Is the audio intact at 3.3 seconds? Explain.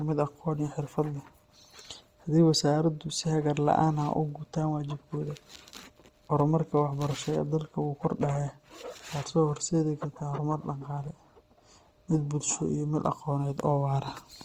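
No, at 3.3 s the speech has a rough, grainy, noise-filled texture, as it does throughout, likely from Opus compression at a low bitrate, around 24 kbps, with starved bands filled with noise.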